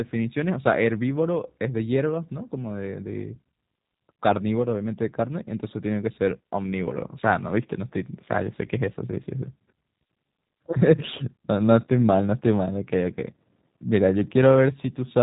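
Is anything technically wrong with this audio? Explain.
Yes. A G.729 codec, likely G.729A at 8 kbit/s, rebuilds the speech from a vocal tract filter and sparse pulses throughout, cutting everything above 3.8 kHz and leaving it dull, rough and plainly synthetic.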